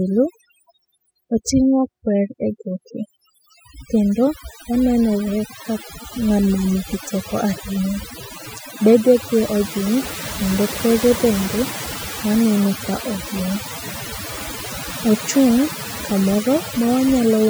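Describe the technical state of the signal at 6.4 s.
At 6.4 s the background sits in near silence with twinkling specks. This is overdone noise removal, present throughout the clip: an overly aggressive noise reducer pulls individual frequency bands down near its noise estimate, taking quieter parts of the voice with them.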